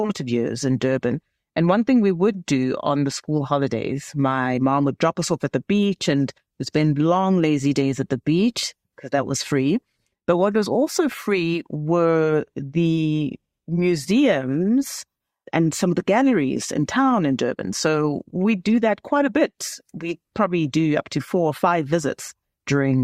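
No technical faults can be heard anywhere in the speech, with the signal keeping a steady, intact path from the first moment to the last.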